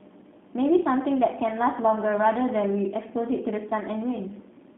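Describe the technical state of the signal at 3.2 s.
At 3.2 s the speech carries G.729 codec damage, present from start to finish. The line is confined to roughly 200 Hz to 3.6 kHz, and the plainly audible roughness fits coding at 8 kbit/s. The codec resynthesises each 10 ms frame from a vocal tract filter, a pitch predictor and a few sparse excitation pulses, so fine waveform detail is lost, leaving a slightly buzzy, synthetic texture over intelligible speech.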